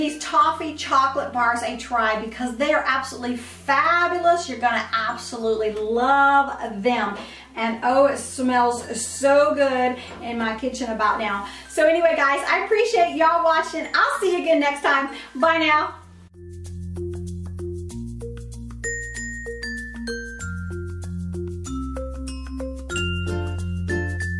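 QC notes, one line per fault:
No technical faults are audible anywhere in the audio, and the signal holds steady without any disturbance to its level, continuity or timing.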